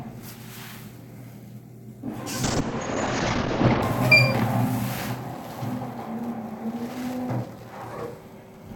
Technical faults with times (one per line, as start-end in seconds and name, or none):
2.44-3.88 call bitrate drop